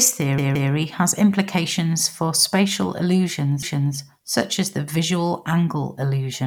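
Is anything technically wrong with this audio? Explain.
Yes. The audio has repeated frames in two places. From 0.38 to 0.72 s, a 171 ms block plays twice more. From 3.63 to 3.97 s, a 341 ms block plays once more. Compressed frames were duplicated before decoding, so the decoder replays them. Each event adds 341 ms and is heard as a stutter.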